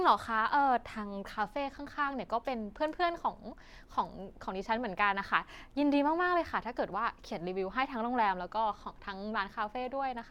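No technical faults are audible.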